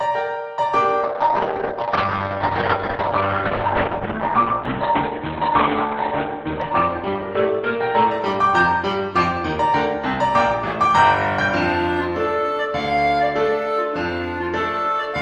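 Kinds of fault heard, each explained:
Call bitrate drop: From about 1.04 s to 9.67 s the encoder's bitrate falls from 48 kbps to 7 kbps and stays at its lowest for about 4.8 seconds. The audio turns coarse and watery, and the top end closes in from 20 kHz down to 4 kHz, so it sounds muffled. Packet loss gives brief gaps or smeared repeats. This is different: a continuous stretch of degraded, band-limited sound that clears once the bitrate recovers.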